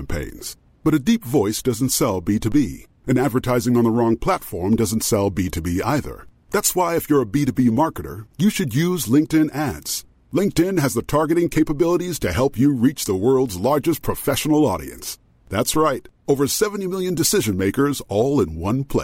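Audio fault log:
2.52 s (after "deep voice doesn't sell") and 15.74 s (before "right over"): DC step. The waveform's zero line jumps by about -22 dBFS and then drains away through a 2 Hz high-pass, heard as a brief low thump.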